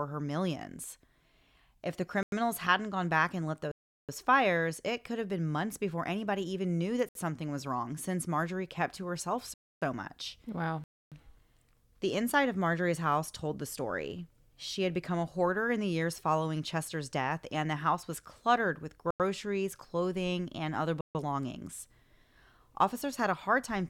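Speech with blocks of digital silence at 2.23, 3.72, 7.09, 9.54, 10.84, 19.11 and 21.01 s, lasting 65 to 372 ms. Each cuts in and out abruptly. On a waveform each shows as a flat line, and on a spectrogram as a blank vertical strip. The 93 ms gaps fit a 4096-sample buffer, pointing to output left unfilled in time.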